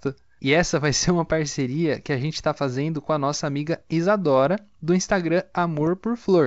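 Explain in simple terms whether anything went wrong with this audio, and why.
A pop at 3.33 s and a rough burst from 5.75 to 5.89 s are bit errors on an ADPCM link, where flipped bits briefly throw the decoder off.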